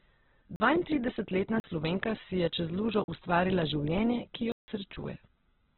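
Throughout the speech, nothing is heard above 4.1 kHz, and the voice sounds muffled, rough and grainy rather than swirly. This is heavy damage from Opus compression, likely from its music (CELT) mode at a very low rate, one that fits about 8 kbps. The encoder keeps each band's energy but fills starved bands with folded or noisy content, so the spectrum has few holes. That distinguishes it from MP3's watery, bubbling artefacts.

Four blocks of digital silence cut the audio out with hard edges. Short 40 ms holes occur at 0.56 s and 1.6 s, and another at 3.04 s, between "si je čez lužo" and "ustvarila življenje ki". A longer 160 ms hole runs from 4.52 to 4.68 s, right after "lužo ustvarila življenje ki". Unlike a lost codec packet, there is no concealment smearing or fade, just abrupt silence.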